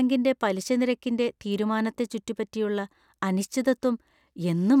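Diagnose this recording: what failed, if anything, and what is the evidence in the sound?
Nothing failed: at no stage, from capture and conversion through processing to playback, does the speech signal show a break, distortion or other audible defect.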